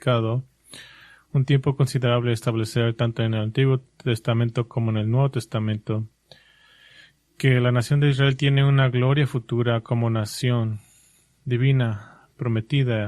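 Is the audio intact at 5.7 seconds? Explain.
Yes, at 5.7 seconds the audio runs on cleanly with no dropout, click, distortion or other fault to be heard.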